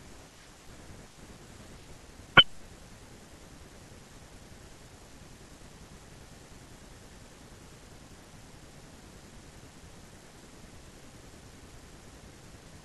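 Nothing is technically wrong with this speech recording.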